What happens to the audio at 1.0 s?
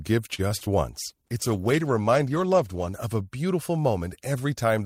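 At 1.00 s a call bitrate drop begins: the bandwidth estimate fell, so the encoder had to spend far fewer bits, consistent with a fall from about 48 to 16 kbps. Until 3.12 s the speech sounds coarser and watery, with its high frequencies cut away.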